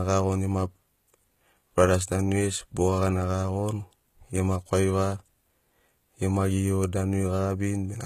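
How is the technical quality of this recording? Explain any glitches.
The recording carries plainly audible codec damage from start to finish, and the treble is the giveaway. Throughout the clip the speech has a sheen of high frequencies that sounds bright but not genuine, with s sounds turning gritty and lispy and nothing at all above about 14.9 kHz. This is likely HE-AAC compression at a very low bitrate, fitting something near 20 kbps. The codec spends its bits on the lower spectrum and fakes the upper range by copying lower bands upward under a coarse envelope, so the rebuilt harmonics don't line up with the real ones. An ordinary low-pass cut would sound dull instead.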